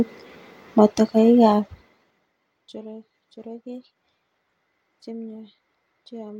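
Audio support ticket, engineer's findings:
Zipper noise, 1.48–2.32 s, speech. Gain ramp of about 25 dB down applied in unsmoothed 2 dB steps, around 15 per second; each step clicks. Probable component: unsmoothed gain stage. Waveform: staircase envelope. Spectrogram: thin vertical broadband lines at each step.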